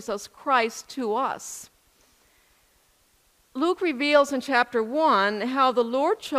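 No faults heard anywhere in the clip.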